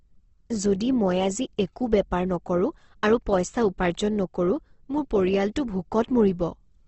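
The speech was likely passed through Opus compression at a very low rate, with the encoder running in its CELT music mode and short of bits throughout. Bands it could not afford to code were filled by folding lower ones or with noise, so the sound comes out rough, noisy and grainy rather than swirly. Nothing remains above 8.2 kHz, and the plainly audible damage across the whole clip fits a bitrate near 16 kbps.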